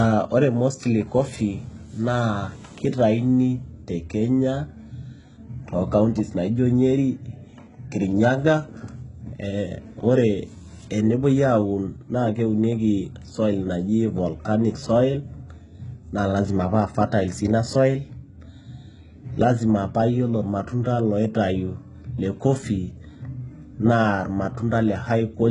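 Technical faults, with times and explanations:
Throughout, HE-AAC compression, likely: the speech has a gritty, metallic top with lispy s sounds and nothing above about 11.1 kHz. The treble is rebuilt from copied lower bands rather than coded, and the damage is heavy enough to suggest a bitrate around 12 kbps.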